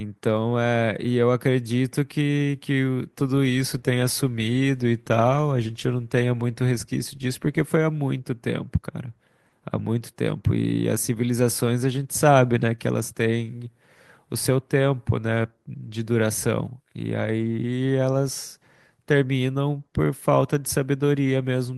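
No faults in this speech.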